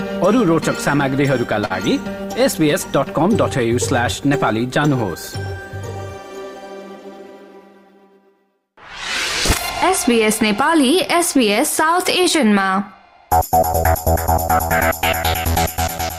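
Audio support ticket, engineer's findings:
Short stall from a late packet at 1.65–1.72 s. Symptom: sound briefly held and smeared, faint buzz or dip, no audible gap. Component: receiver jitter buffer. Mechanism: packet arrived late, buffer ran dry, last audio stretched for about 47 ms, then playback resumed from the same point. Nothing lost; playout latency grows by 47 ms from here on.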